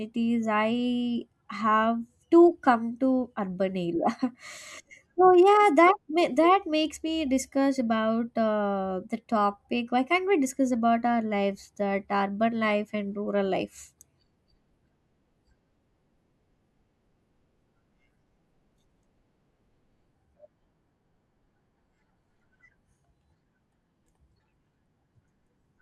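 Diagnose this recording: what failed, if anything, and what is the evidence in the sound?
Nothing failed in this recording, and the sound gives no evidence of a fault at any stage.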